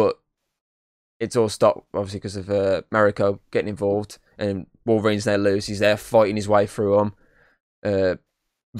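No faults are audible anywhere in the recording.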